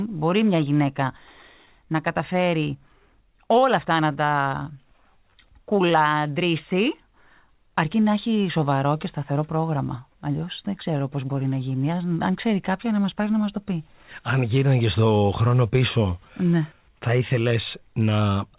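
From start to finish the speech has a faintly unsteady, slightly dragging tempo. This is clock drift between sender and receiver: the sender's clock runs about 3 percent slow, so the receiver's jitter buffer keeps draining and must be topped up with repeated audio to avoid running dry.

Those top-ups are the repeated timing corrections, heard from 0.31 s to 18.50 s as small, unevenly spaced hiccups that all stretch the sound, leaving playback at about 97 percent speed. Together they add around half a second.

Between 1.07 s and 2.43 s, a few brief ticks or smears appear. These are scattered short gaps, about four of them, each no longer than about 10 ms, where packets went missing and the receiver bridged each hole by extending the preceding sound. The concealment totals only a few tens of milliseconds, all heard through the call codec's narrow band, with nothing above 4 kHz.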